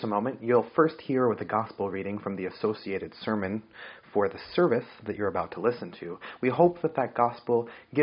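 No technical faults can be heard: the signal carries the ordinary marks of call microphone processing, with the lowest bass trimmed away and nothing present above 8 kHz.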